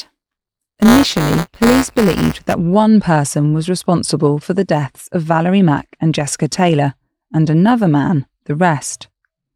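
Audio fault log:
0.00–2.54 s, buffer tearing: a robotic 200 Hz buzz on the speech, since the ring buffer's writer and reader have slipped. A small slice of each 5 ms period replays audio from roughly 10 ms earlier, with hard joins. It clears before "one person was responsible".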